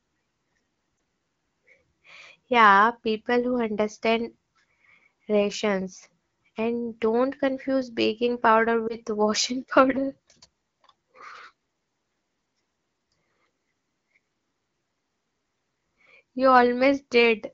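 At 0.97 s and again from 8.87 to 8.96 s, the speech shows lost AMR speech frames. A single 20 ms frame failed its check each time. The decoder repeated the previous pitch and vocal tract settings at reduced gain, giving a brief dip or warble before the wideband speech comes back weak or rough for a moment.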